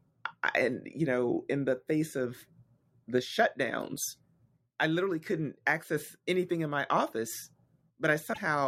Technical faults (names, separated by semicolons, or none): broken MP3 bit reservoir